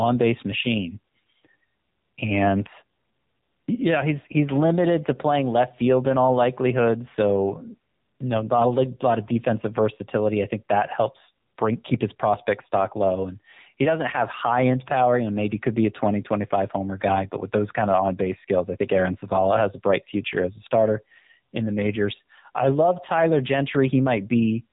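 AMR narrowband mobile codec damage runs throughout the whole clip, from start to finish. The speech has been squeezed through the mobile narrowband codec, which samples at 8 kHz, so nothing above 4 kHz survives and the voice sounds boxed-in and dull. Each 20 ms frame rebuilds the voice from a vocal-tract model fed by only a few pulses, and the plainly buzzy, synthetic edge points to one of the lower modes, which fits a rate of about 7.4 kbps.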